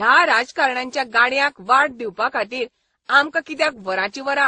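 Throughout, the speech carries layered coding artefacts. Nothing remains above 9.5 kHz, so the top end sounds dull. The artefacts of the different codecs are heard together. This is likely transcoding between lossy codecs: a low-rate MP3 re-encoded through Opus, then WMA.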